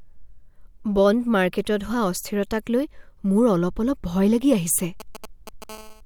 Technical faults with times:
5.00-5.64 GSM signalling bursts
5.69-6.01 GSM phone buzz

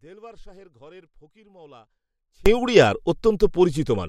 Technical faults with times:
0.00-2.46 audio dropout to a faint residue

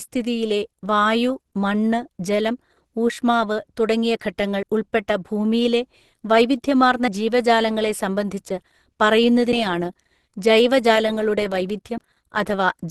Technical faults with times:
0.00-12.90 Opus compression
4.63 audio missing between chunks
7.08 audio missing between chunks
9.53 audio missing between chunks
11.98 audio missing between chunks

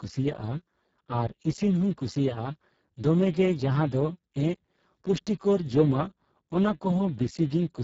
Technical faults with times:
0.00-7.83 Speex codec

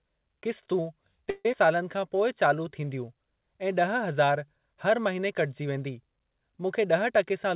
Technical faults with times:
1.30-1.46 call audio freeze
1.52 skip ahead
1.65-2.70 jitter buffer slow-down
6.78-7.54 jitter buffer speed-up

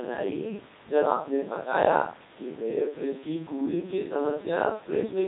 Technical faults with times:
0.00-5.27 Codec 2 vocoder

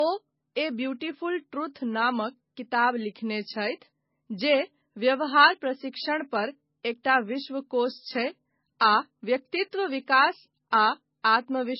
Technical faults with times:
0.00-11.79 low-bitrate audio saved at a high bitrate

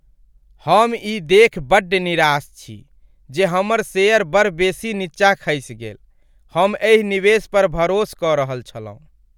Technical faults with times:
none

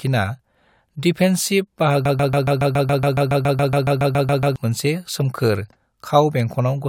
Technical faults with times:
2.05-4.56 broken-record loop

